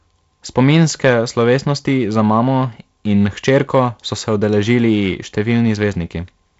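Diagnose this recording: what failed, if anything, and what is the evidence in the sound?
The converter or a gain stage just ahead of it overloaded, driving the speech about 3 dB past full scale from 0.58 to 1.11 s and from 3.48 to 3.79 s. That is hard clipping: flattened peaks throw off high harmonics, heard as crackle on the peaks of loud syllables beneath the G.722 link's 7.7 kHz ceiling.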